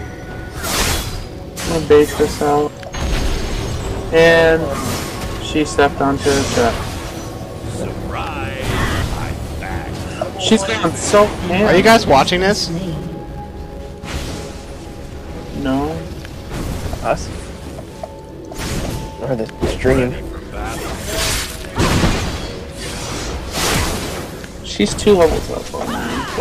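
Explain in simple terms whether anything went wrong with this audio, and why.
Yes, something's off the whole way through: a faint buzz at about 345 Hz that gets louder and softer with the sound. That's a filter restarted on every block, forgetting its state and ticking at each new block, which fits a 128-sample block size.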